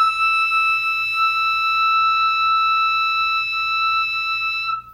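Video or display buzz runs from start to finish beneath the music. A screen or video cable is coupling its signal into the audio path, so a buzz at the 59.94 Hz picture field rate sits under everything, with a gritty hash of harmonics above it. A thin, very high whine at the 15.7 kHz line rate rides on top. The interference stays well below the music, roughly 35 dB down, but it is steady.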